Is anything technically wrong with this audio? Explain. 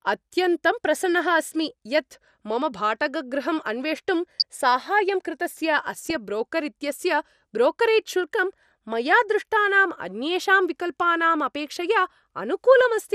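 Yes. There are two faults: a codec problem throughout the speech and three short bursts of DAB burbling.

MP2 compression affects the whole clip. The speech sounds dull, with a granular, gurgling roughness and upper frequencies that flicker in and out. The likely cause is MPEG Layer II coding at a low rate, around 80 kbps. Layer II splits the signal into 32 sub-bands and shares out a fixed bit budget among them. At this rate there are too few bits, so upper bands are switched off and the remaining bands are quantised coarsely.

DAB burbling occurs at 4.40–4.43 s, just before "साहाय्यं कृतस्य". It recurs at 6.04–6.15 s, right after "अन्वेष्टुं साहाय्यं कृतस्य", and briefly at 12.85 s. Each event is a short burst of burbling distortion. The error rate is a small fraction of a percent, high enough for some bit errors to get past the error correction into the MP2 frames. Corrupted samples put short blips of noise in single sub-bands, and corrupted scale factors make sub-bands jump in level for up to a frame.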